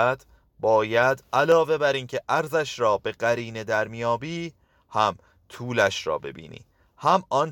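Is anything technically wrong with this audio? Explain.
Yes. From 1.52 s to 7.16 s the speech carries a regular click about every 1.88 s, a tick that recurs at the same interval while the talker continues. These are likely clock drift buffer slips. Two devices in the chain run on clocks that differ by around 100 ppm, so the buffer between them creeps toward full or empty until a handful of samples is dropped or repeated. Each jump breaks the waveform and produces a tick.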